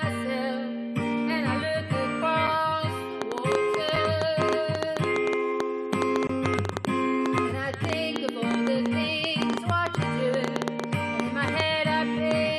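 The sound has two kinds of fault. The first is a block of digital silence, heard twice. At 2.47 s a 5 ms hole cuts in with no fade. It sounds like a single tick. It fits a 256-sample buffer that was not filled in time. From 6.27 to 6.29 s a longer 21 ms block of silence follows. It is heard as a short hole. It fits a 1024-sample buffer left empty. The second fault is a train of clicks from 3.2 s to 12.3 s. There are around seventy of them, about 7 per second, at an uneven pace. They share much the same shape. The loudest stand roughly 15 dB above the sound. They tick over the audio and through the pauses. The likely cause is interference from nearby equipment or a faulty connection or power supply.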